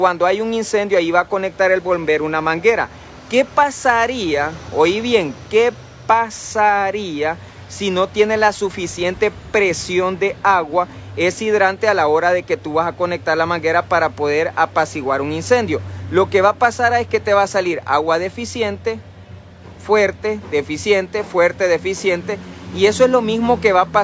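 No technical faults can be heard anywhere in the audio. There is nothing here that calls for a timestamp or a fix.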